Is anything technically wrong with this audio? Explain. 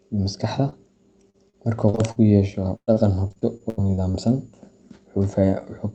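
Yes, there are packet loss problems on this call. At 0.69–0.74 s there's short concealed packet loss: a few hundredths of a second went missing, and the receiver stretched the previous sound over the hole, leaving a quick smear.

Then there's repeated packet loss, with robotic sound, over 1.30–2.18 s and again over 2.76–4.16 s. Holes kept arriving one after another, each patched by continuing the last sound. The result is choppy speech with pieces dropped. The second stretch is worse: about a quarter of it is filled in, and one gap runs 116 ms. The call codec's top end stops around 8 kHz, so the speech sounds a bit dull on top.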